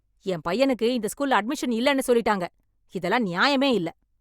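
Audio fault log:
No technical faults can be heard anywhere in the speech signal.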